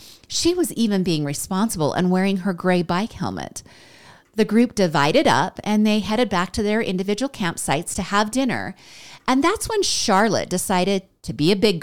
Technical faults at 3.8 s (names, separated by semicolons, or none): none